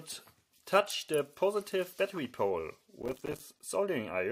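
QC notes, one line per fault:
3.02–3.40 s, processor overload crackle: dozens of missed deadlines leave hard-edged silent gaps (around 5 ms each), seen as waveform dropouts and broadband spectrogram streaks.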